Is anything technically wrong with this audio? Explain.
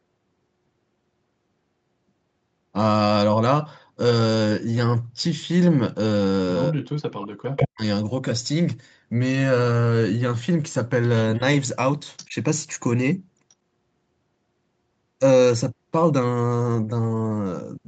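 Yes. From 6.69 to 7.84 s, and briefly at 11.38–11.43 s and 12.27–12.35 s, the speech dips, by about 40 dB at worst in the first stretch and by about 5 dB and 15 dB later. This is likely speech suppressed in double talk: an echo canceller, unable to separate the talker from loudspeaker echo while both sides spoke, attenuated everything.

Short delayed copies of the speech, about 121 ms behind, appear at 7.57–7.67 s (roughly as loud as the speech), 12.17–12.27 s (about 20 dB down) and 13.50–13.54 s (faint). This is likely echo leak: a speakerphone's canceller failed to remove all the picked-up signal and sent it back.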